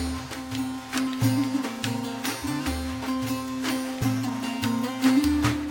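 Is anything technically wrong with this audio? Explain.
Yes. Compressed frames skipped at 2.67 s and 4.01 s: the decoder drops whole frames, so the audio jumps ahead by about 50 ms each time, which points to a few frames lost.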